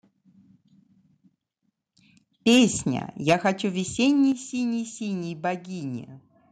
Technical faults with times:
2.47-2.64 microphone overload
3.29-3.33 microphone overload
3.33 microphone volume stepped down
4.32 microphone volume stepped down

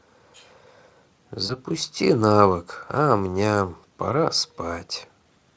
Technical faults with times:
1.45-1.59 VoIP packet loss concealed by the speech codec

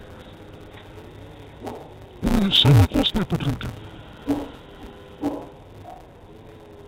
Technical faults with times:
0.00-6.88 interleaved audio read as planar

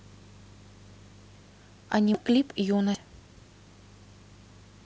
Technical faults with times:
2.14 audio missing between chunks
2.94 audio missing between chunks

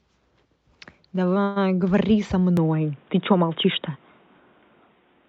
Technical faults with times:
1.43-1.58 call audio freeze
2.57-5.29 input switched to a poorer device

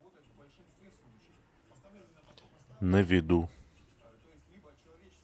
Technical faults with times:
none

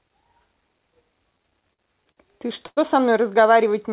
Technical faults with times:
1.38-2.79 repeated stalls (stutter)

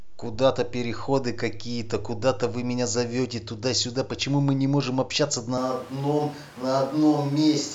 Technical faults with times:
5.58-7.75 switch to a distant microphone

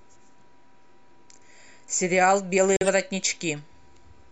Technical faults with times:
2.77-2.89 corrupt frame muted

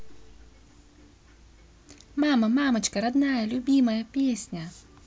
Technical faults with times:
none

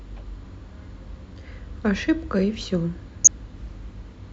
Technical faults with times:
3.24-3.28 DAB burbling

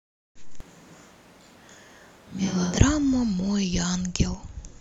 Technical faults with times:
0.60-2.78 switch to a distant microphone

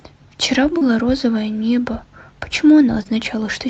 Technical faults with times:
0.77-0.83 short concealed packet loss
3.03-3.07 short concealed packet loss

